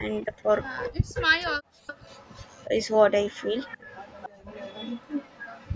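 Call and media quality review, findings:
Speech suppressed in double talk. Level dips at 0.00–0.45 s, about 10 dB, and at 2.67–2.71 s, about 5 dB. Deeper cut at 0.92–1.42 s, about 40 dB, for roughly half a second. Likely the echo canceller, unable to separate near talker from loudspeaker echo, attenuating both.

Echo leak. Delayed copy of the speech, 276 ms behind. Heard at 0.19–0.91 s and 3.31 s to the end, about 15 dB under the speech. Fainter at 1.87–2.88 s, about 25 dB down, and 1.41–1.45 s, about 35 dB down. Likely incomplete cancellation on a loudspeaker endpoint, with the residual sent back.

Background gated by the echo canceller. Room sound drops out at 1.70–1.86 s, about 40 dB deep, for roughly 150 ms. Canceller clamped the microphone hard during loudspeaker playback. Background returns when it releases.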